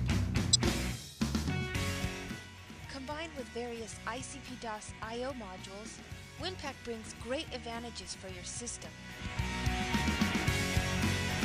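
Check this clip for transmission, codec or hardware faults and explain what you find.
One fault: a corrupt frame decoded, from 0.53 to 0.56 s. Bit errors reached a couple of compressed frames, and the decoder played them instead of discarding or concealing them. Misread gain values and spectral codes put energy at the wrong frequencies for the roughly 28 ms those frames span, peaking around -10 dBFS. It is heard as a short foreign artefact, a chirp, squeak, blip, noise burst or brief hole, that does not belong to the surrounding sound.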